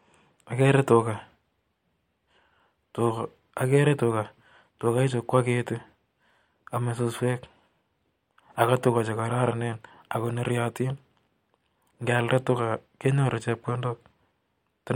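Nothing technically wrong turns up anywhere in this speech recording, so there's no fault to point to, no time to flag and no cause to explain.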